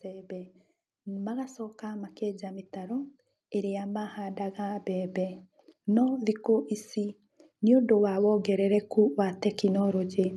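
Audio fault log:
0.05–5.42 s and 6.97–10.36 s, automatic gain rising: the level control, judging the input too quiet, lifts gain slowly, by about 10 dB in the first span, so speech and background swell together.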